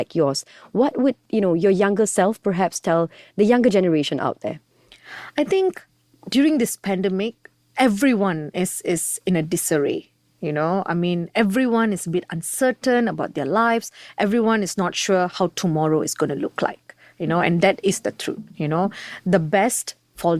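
No technical faults can be heard anywhere in this speech recording. Nothing in the signal chain draws attention to itself at any point.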